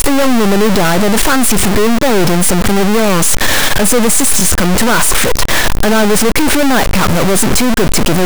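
A stuck bit runs through the whole of this speech recording: distortion rides on the sound from start to finish, and the pauses between phrases are filled with a noise floor instead of falling quiet. The likely cause is a single data bit held at a fixed value by a broken line or converter, so roughly half the samples are pushed off by that bit's weight and small values near silence flip to noise. A repeated buffer occurs twice, at 1.60 to 1.62 s and again at 4.40 to 4.42 s. Each time, a 20 ms stretch plays once more immediately after itself because fresh audio did not reach the output in time. With a piece this short, the repeat is heard as a brief click or buzz rather than a clear stutter, and the hard join at the repeat boundary causes that click. No audio appears to be lost, since playback simply picks up again after the duplicated section.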